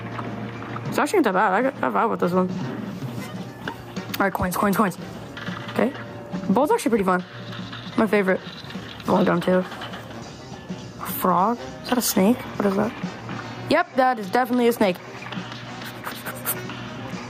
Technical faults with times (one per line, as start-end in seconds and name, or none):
0.00-17.29 gain pumping